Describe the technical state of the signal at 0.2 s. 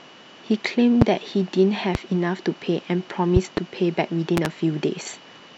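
At 0.2 s the speech signal is intact, with no fault present at that moment.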